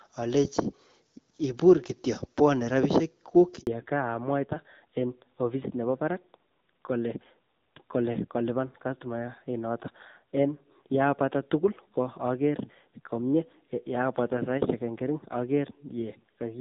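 At 3.61 s the audio drops out in a handover gap lasting until 3.67 s, about 60 ms. While the call passed between networks no frames arrived, so the sound fades quickly to silence. The waveform shows a flat stretch and the spectrogram a blank vertical strip.

From 3.67 s to the end, a fallback to narrowband takes over. Before this, the wideband HD Voice path carried content up to about 7 kHz, with clarity that fits a rate near 12.65 kbit/s. Afterwards nothing remains above 4 kHz, and the speech sounds duller and rougher, which points to a narrowband codec at around 7.4 kbit/s. On a spectrogram the upper band is cleanly cut off at 4 kHz.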